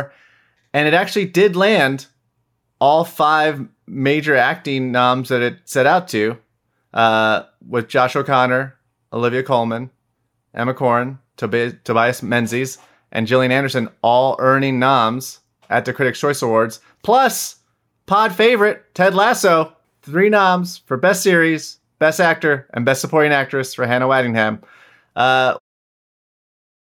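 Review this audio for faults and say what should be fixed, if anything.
Nothing here needs fixing, and the gentle fade-out at the very end of the speech, from around 25.5 s to 25.6 s, is just a smooth editor's touch.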